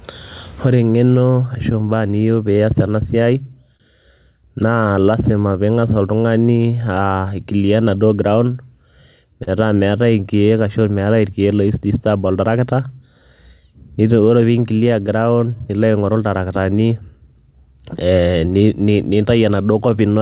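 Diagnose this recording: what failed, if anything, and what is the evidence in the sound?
Clock drift between sender and receiver is the root fault, at the network and buffer stage. The sender's clock runs roughly 3 percent slow relative to the receiver. Its packets arrive a little late on average, so the jitter buffer keeps draining. The whole clip carries small, uneven timing hiccups. The speech is band-limited to 4 kHz by what sounds like a G.711 call path.

Repeated timing corrections run from 0.93 s to 19.91 s. The receiver compensates for the slow sender by stretching the audio. Playback runs at 98 percent speed and adds about half a second over the span. The edits all go the same way, lengthening, but they are unevenly spaced. Each one is small.

A short stall from a late packet occurs at 3.77 s, lasting 29 ms. A packet missed its slot and the jitter buffer ran empty. The receiver held the last sound for 29 ms until the packet turned up, then resumed from the same point. 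Nothing is lost. The evidence is one slightly over-held sound with a slight buzz or dip, and the playout delay grows by 29 ms.

Scattered short gaps fall between 9.44 s and 11.72 s, at the network and concealment stage. About three packets arrived late across this stretch. The receiver covered each hole by extending the preceding sound. The longest patch is around 30 ms, and together they fill about 50 ms, a small share of the span. No audio is missing. They are heard as brief ticks or smears within the speech.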